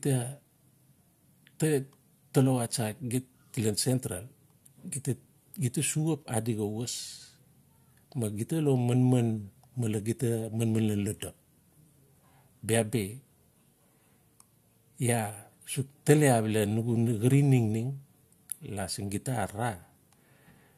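No technical faults can be heard in this speech recording. Nothing in the sound points to a problem anywhere along the way it was captured or delivered.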